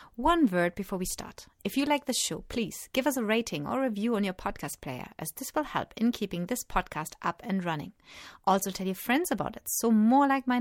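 No technical faults can be heard in this speech recording. Nothing in it calls for a timestamp or a fix.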